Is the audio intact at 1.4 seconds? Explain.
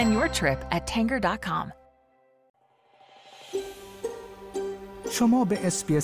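Yes, the audio is intact at 1.4 seconds, with no dropout, click, distortion or other fault at that moment.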